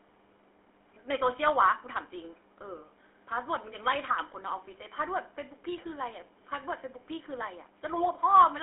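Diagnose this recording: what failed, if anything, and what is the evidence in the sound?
The failure is at the codec stage: the speech has gone through the GSM full-rate codec for its whole length. It has a plainly audible buzzy, gravelly roughness. The codec rebuilds the voice from a vocal-tract filter excited by a sparse, regularly spaced pulse train, which matches a 13 kbps full-rate stream. On a spectrogram, energy stops abruptly near 3.7 kHz and is thin below 300 Hz, fitting a 300 to 3400 Hz line band, and the harmonics look coarse and grainy.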